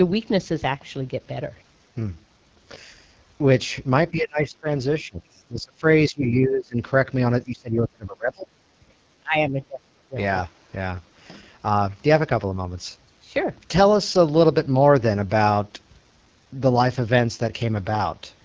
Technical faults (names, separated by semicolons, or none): AMR wideband (HD Voice) codec; speech suppressed in double talk